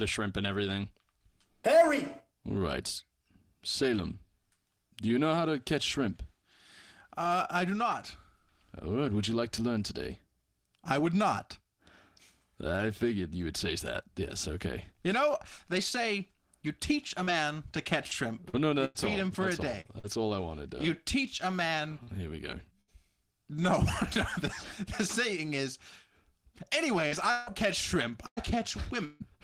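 Choppy, robotic sound breaks up the audio from 17.23 to 20.05 s, between "say you teach a" and "all I wanted". This is repeated packet loss: six gaps, the longest 98 ms, were patched by continuing the last sound, and some of them were rebuilt from error-correction copies.

Right after "you teach a man", at 22.03 to 22.10 s, there is a brief smear. A short concealed packet loss left 40 ms missing and filled in from the preceding sound.

Within that smear, at 22.07 to 22.09 s, a 20 ms stretch sounds rougher and noisier. That lost packet was rebuilt from error correction, using the low-bitrate copy carried by the next packet.

At 22.81 to 22.91 s the sound holds and fades, then resumes further on. This burst of packet loss dropped 60 ms, and the receiver covered it by extending and turning down the last sound.

Robotic choppiness returns from 27.08 to 29.22 s. It is more repeated packet loss: four gaps, the longest 157 ms, leave about a fifth of that stretch concealed.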